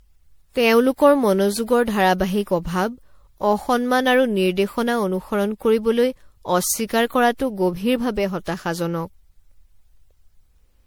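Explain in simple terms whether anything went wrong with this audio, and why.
Something did go wrong, and it runs through the whole clip: the speech has a swirly, watery, hollow quality, and the starts of sounds come out smeared instead of crisp. That's generation loss. It's likely the audio was squeezed into MP3 and unpacked again roughly half a dozen times or more. Each round throws away a bit more detail in slightly different places, so the damage piles up and sounds worse than a single pass would.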